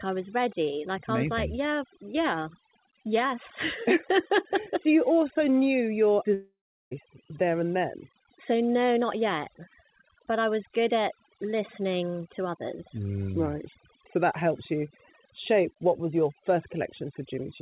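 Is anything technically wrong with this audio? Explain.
Yes, there are two faults in this speech recording.

Overdone noise removal runs throughout. Bands near the estimated noise floor are cut hard, leaving a near-silent background with twinkling specks. This is different from the call path's 4 kHz band limit, which only dulls the sound.

From 6.34 to 6.93 s, after "you also knew your", the sound turns into a fading buzz. It goes silent for about 0.38 s and resumes at "there and then" with about 0.58 s missing. The likely cause is a long network dropout. Unlike a brief packet loss, the concealment runs out and leaves real silence.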